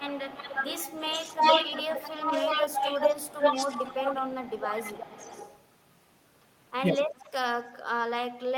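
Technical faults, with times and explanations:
0.0–5.6 s and 7.15–7.29 s, echo leak: a delayed copy of the speech returns, about as loud as the original at 357 ms, then a faint scrap at 383 ms, likely from a loudspeaker-side echo canceller letting pickup through. Spectrograms show duplicated harmonic patterns shifted right; waveforms show repeated envelopes.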